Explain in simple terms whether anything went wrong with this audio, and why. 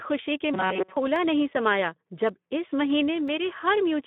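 The whole clip has gone through the Speex codec, the old speech codec used in VoIP and game chat, at a fairly low quality setting. You can plainly hear it: the speech sounds rough and a bit hoarse, since the codec has few bits to describe the buzz of the voice. It's also squeezed into a phone-like band, roughly 150 Hz to 3.5 kHz, so it sounds thin and boxy.

From 0.54 to 0.97 s, just before "नहीं समाया", the speech turns into a stiff, metallic buzz pitched at about 188 Hz. That's robotic sound from repeated short buffers. Most likely the audio stopped arriving in time, and the playback kept looping the last little chunk, about 5 ms long, over and over instead of playing the real audio. Most of that stretch is repeats, which is why the sound loses its natural movement and picks up that fixed pitch.

There are also three tiny clicks, at 1.16 s, at 2.29 s and at 3.28 s. The first comes just before "नहीं समाया" and the second right after it. 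These are dropped samples, likely a tiny sliver of audio, a fraction of a millisecond, going missing from the stream. The waveform suddenly jumps to a later point, and that jump comes out as a single sharp tick. Nothing is lost that you'd notice as missing sound.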